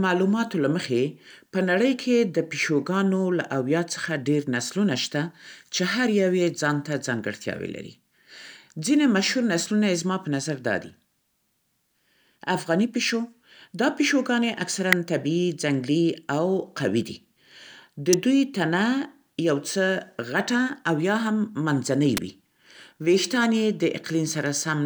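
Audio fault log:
14.93 s, 18.13 s, 22.17 s: electrical switching spike, three sharp snaps laid over the speech, each a few milliseconds long and peaking around -5 dBFS. The abrupt, broadband shape points to a likely nearby switch or motor arcing and coupling into the audio line.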